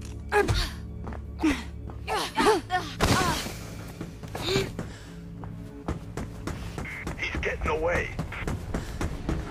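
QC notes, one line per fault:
Nothing to flag on this one; I listened the whole way through and didn't catch anything worth writing up.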